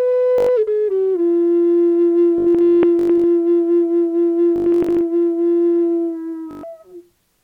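Bluetooth stutter occurs at 0.38 to 0.49 s, 2.38 to 3.24 s, 4.56 to 5.01 s and 6.51 to 6.63 s. Data arrived late or not at all, so the receiver kept replaying its last short buffer, heard as a buzzing, machine-gun repeat, then jumped ahead. About 0.1 s is lost in the first event and 0.12 s in the last. The middle two scatter 0.59 s of losses across 0.85 s (longest run 0.2 s) and 0.35 s across 0.45 s.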